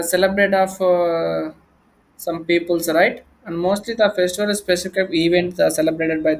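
Listening to this speech recording, nothing technical stood out.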